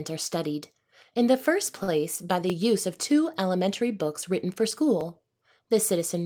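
At 1.83 s, just after "studied in the first", there is a short stall from a late packet. The next packet had not arrived when it was due, so the jitter buffer ran dry and the receiver held the last sound for about 46 ms until the data caught up. Playback then resumed from the same point, so no speech is lost, but the syllable is audibly stretched and carries a slight buzz or dip. The whole stream sits about 46 ms later from there on.

Overlapping chunks appear at 2.50 s, just before "use of two elementary", and again at 5.01 s, right after "elementary books written for". The audio was handled in blocks of 2.5 s, and each new block began 12 ms before the previous one finished. As a result, that 12 ms slice is played twice at every join. Each seam produces a brief click or tiny stutter, and the two events are spaced about one block apart.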